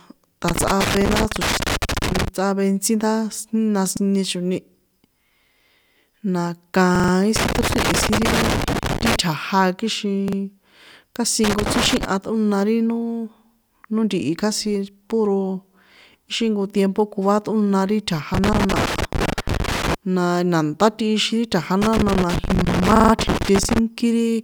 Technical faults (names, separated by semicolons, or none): loose connector crackle; repeated buffer